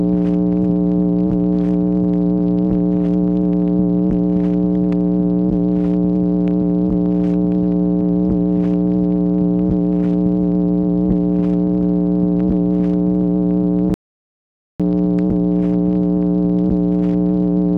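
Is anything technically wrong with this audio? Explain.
Yes. From 13.94 to 14.80 s, an audio dropout to silence: sound stops dead for about 0.86 s into silence, not faded room tone, likely a lost input.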